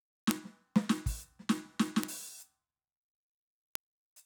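Bit error spikes tick sharply through the music at 0.31 s, 2.04 s and 3.75 s, each about -7 dBFS. Single flipped bits push one or two samples away and back.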